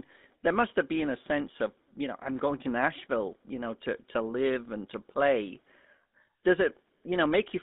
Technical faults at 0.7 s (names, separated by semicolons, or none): GSM full-rate codec